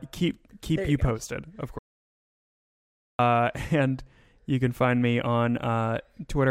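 At 1.79 s the speech cuts off abruptly into total silence, with no room tone, and returns mid-flow at 3.19 s, so about 1.4 s of speech is lost. This is an audio dropout to silence, likely from the input being lost while the recorder kept writing zeros.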